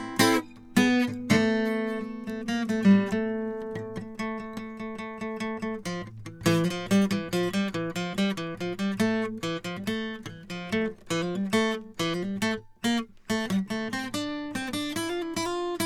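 No technical faults are audible.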